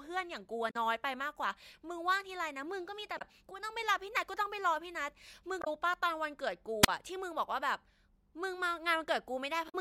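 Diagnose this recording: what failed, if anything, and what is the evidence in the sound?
The compressed stream carries damaged data, which is a storage or transmission fault at the codec stage. Short chirps and blips break the speech at 0.67 to 0.76 s, 3.15 to 3.22 s, 5.61 to 5.68 s and 9.65 to 9.75 s. Each lasts under a tenth of a second. Corrupted bytes make the decoder misread those frames. It loses sync and hunts for the next valid frame header. That produces the squawk.

A wireless microphone squelch dropout sits upstream, on the analogue radio link. At 6.82 to 6.88 s the speech gives way to a brief lift of hiss. Then comes a hole of near silence, about 37 ms long, before the speech returns. The FM signal from the transmitter faded below the receiver's threshold. The squelch then muted the output until the carrier recovered.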